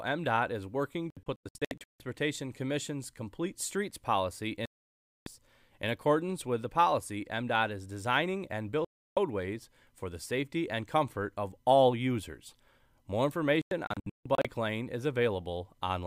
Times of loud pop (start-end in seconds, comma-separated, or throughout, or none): none